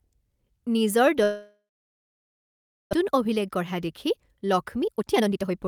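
From 1.23 s to 2.95 s the speech cuts out in what is likely a long network dropout. Right at the start you hear the last sound smeared on as a buzzy tail that fades, then about 1.3 s of dead silence. When the audio comes back, around 0.9 s of speech is simply gone and never played. The stream also picks up roughly 0.7 s of extra delay.

Then from 3.03 s to 5.67 s the receiver works through that backlog with a jitter buffer speed-up. It keeps snipping out tiny slices a pitch period or so long, over and over, so the speech runs at about 125% speed while the pitch stays put. It sounds rushed. Across that stretch roughly 0.7 s of audio gets trimmed to bring the delay back down.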